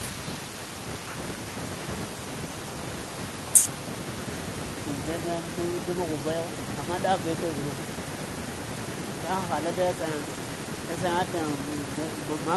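No technical faults are audible.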